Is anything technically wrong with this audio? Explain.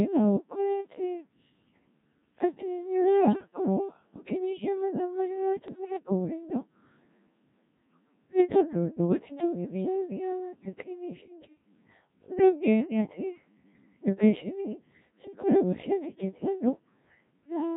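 Yes, two faults. Throughout, the speech has Codec 2 vocoder damage. The decoder rebuilds the speech from sine waves driven only by pitch, voicing, level and a coarse spectral envelope, which fits the 1.3 kbit/s mode. The result is heavily robotic and buzzy. Unlike ordinary low-bitrate codec smearing, the original waveform's texture is simply gone.

Bit errors on digital voice radio occur at 3.20 to 3.33 s and again at 5.68 to 6.03 s, with the later burst longer. Corrupted bits, at a rate of several percent, scramble the per-frame pitch, level and spectrum values. The speech lurches into warbles and bleeping gibberish. Packet loss, by contrast, would produce gaps or repeats rather than garbled synthetic sound.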